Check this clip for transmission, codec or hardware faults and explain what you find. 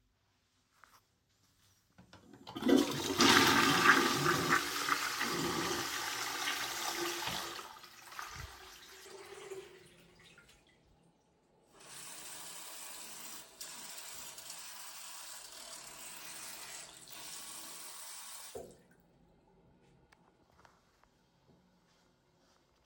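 No transmission, codec or hardware fault can be heard anywhere in this recording of sounds. Nothing in it points to trouble in how the audio was sent, encoded or captured.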